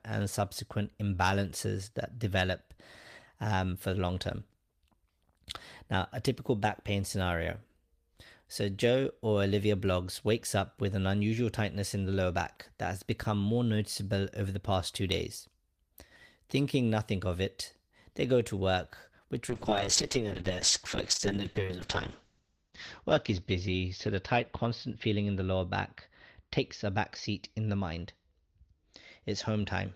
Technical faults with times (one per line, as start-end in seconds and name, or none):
19.51-29.95 call bitrate drop